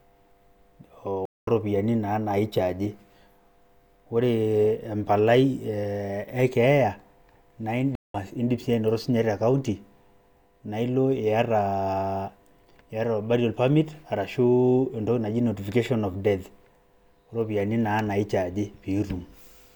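At 1.25 s and again at 7.95 s, the speech drops out in a stream reconnect. The connection broke and a fresh decoder restarted. After silences of 219 ms and 190 ms, the audio fades back in about 0.15 s and 0.2 s further on, skipping ahead.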